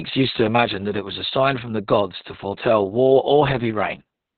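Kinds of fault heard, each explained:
Opus voice compression: The whole clip runs through Opus in its SILK linear-prediction mode at a very low rate, which fits about 6 kbps, with the band cut to narrowband so nothing survives above roughly 4.3 kHz. The speech sounds muffled, hoarse and slightly robotic because the excitation is coded coarsely. What separates this from a simple low-pass filter is that rasping, buzzy texture. A filter would only dull the sound and leave the voice itself smooth.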